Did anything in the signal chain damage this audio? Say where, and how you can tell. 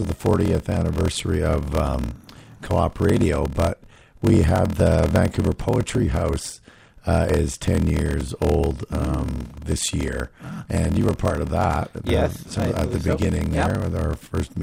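Yes, a padded block size mismatch at the driver or buffer stage: zero-filled gaps in every block cause a steady 41.7 Hz buzz, and the speech runs at 0.889 speed.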